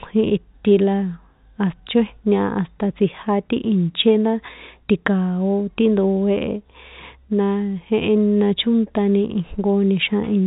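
Speech carried over a call path with nothing above 4 kHz, which fits narrowband G.711 mu-law telephony, and no technical faults are present.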